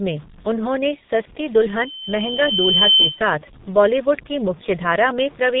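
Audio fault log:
Throughout: G.723.1 codec. The speech is muffled and hoarse, with consonants smeared together. Nothing above 3.8 kHz survives. The sound points to a rate near 6.3 kbit/s. The codec cuts the signal into 30 ms frames. It rebuilds each frame from a slowly updated model of the voice. Heavy damage of this kind blurs quick changes. Fricatives and stops lose their edges. The voice takes on a rough, buzzy grain.
1.68 to 3.22 s: loudspeaker feedback squeal. Right after "में उन्होंने सस्ती", a single tone at 3.1 kHz appears. It swells over about a second into a steady squeal. At its peak it sits roughly 5 dB above the speech. A microphone is hearing its own loudspeaker. At this frequency the loop gives back more than it receives, so the tone feeds itself. It stops once the loop is broken.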